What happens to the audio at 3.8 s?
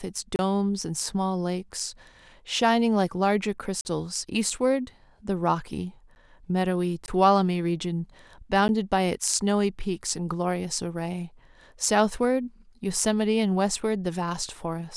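From 3.81 to 3.85 s there is a block of digital silence: 40 ms of samples replaced by zeros with no fade. The waveform shows a flat line and the spectrogram a blank vertical stripe.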